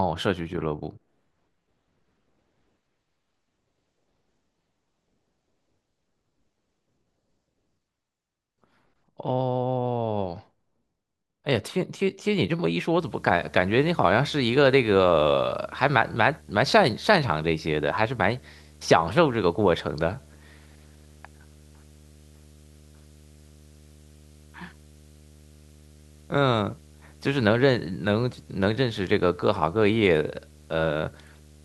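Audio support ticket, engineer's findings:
Video or display buzz from 12.99 s to end of clip. 75 Hz field-rate buzz with hash above, roughly 30 dB under the speech. Screen or video cable coupling into audio path. Spectrogram: steady 75 Hz line plus harmonics and a raised broadband floor from onset.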